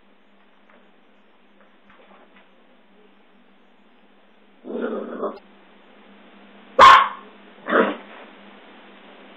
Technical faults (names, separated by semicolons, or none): damaged data in a compressed stream